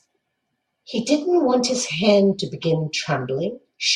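No technical faults can be heard in this speech recording.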